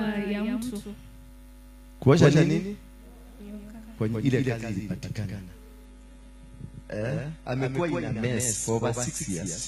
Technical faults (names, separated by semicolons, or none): doubled audio track; adaptive stream at a lower bitrate